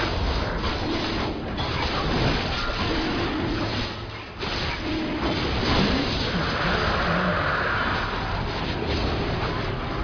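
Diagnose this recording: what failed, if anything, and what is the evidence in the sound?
The sample-rate conversion stage failed: the audio was downsampled with no anti-aliasing filter, which points to a rate near 11 kHz. Throughout the clip, content above the 5.5 kHz fold mirrors back as fairly strong aliasing, giving gritty, metallic tones unrelated to the source.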